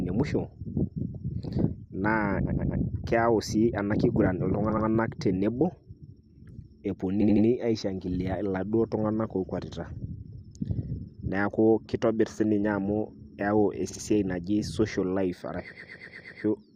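Repeated frames occur at 2.45–2.81 s, 4.69–4.85 s, 7.21–7.46 s, 13.89–14.01 s and 15.71–16.43 s. Short blocks of compressed speech, 60 to 120 ms long, were played again two to six times in a row. Each one stutters and stretches the clip, by up to 0.72 s in the last.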